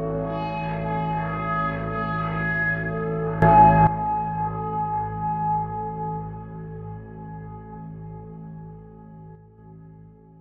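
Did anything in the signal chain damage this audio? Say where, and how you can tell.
Yes, two sudden gain jumps. Level rises about 13 dB at 3.42–3.87 s and falls about 6 dB at 9.35–9.58 s. Background moves with it, likely an unramped digital gain step.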